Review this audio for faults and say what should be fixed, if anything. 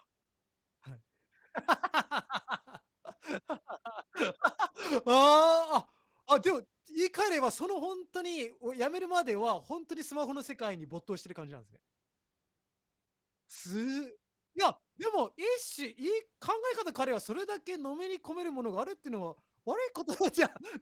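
Opus voice compression runs through the whole clip. The speech sounds hoarse and faintly robotic, which fits a hybrid mode at roughly 16 kbps: SILK codes the band below 8 kHz with coarse excitation, and a thin CELT layer covers the top. A spectrogram would show smeared harmonics, blocky 20 ms frame structure and sparse, patchy energy above 8 kHz. To prevent it, encode at a higher bitrate or keep an uncompressed master for processing.

A bit error spike occurs at 7.62 s as one sharp, broadband tick. A single flipped bit pushed one sample's value by a power of two before it snapped back. On the waveform this is a lone one-sample needle; a spectrogram would show a thin vertical line spanning all frequencies. To prevent it, use error-checked storage and transfer links, and repair the isolated sample by interpolation.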